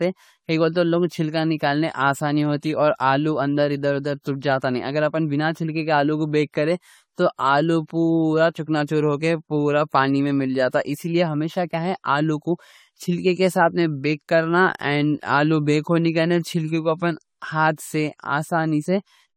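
Speech throughout the recording has a swirly, hollow, smeared quality, with blurred consonant onsets and nothing above about 18.7 kHz. This points to generation loss, likely from the audio being run through an AAC-LC encoder around five times, which fits a 64 kbit/s setting. A single encode at that rate would sound cleaner. Here the noise and spectral holes build up because each pass quantises on a shifted frame grid, smearing the attacks further each time.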